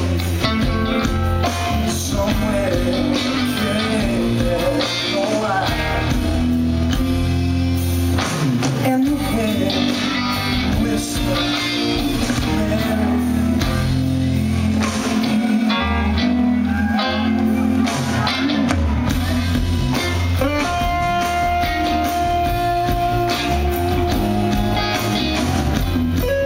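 Nothing here sounds technically wrong; the audio just runs along without a single hiccup worth pointing out.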